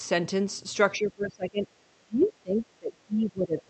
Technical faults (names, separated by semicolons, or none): speech suppressed in double talk